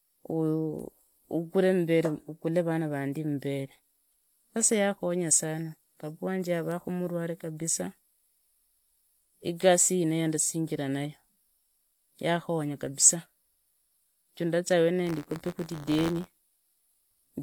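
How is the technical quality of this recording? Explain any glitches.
The recording has one clear glitch, buffer tearing, near the end. From 15.06 s to 17.19 s, just after "juu ndaza", the speech takes on a robotic 86.1 Hz buzz, which fits a 512-sample buffer. The writing and reading positions in the playback ring buffer have crossed, so a small slice of each period, a few percent, repeats audio from about 20 ms earlier, with hard joins at both edges. On a waveform this shows as small step discontinuities every 11.6 ms. A spectrogram shows fine vertical striations at that spacing, present only where speech is present.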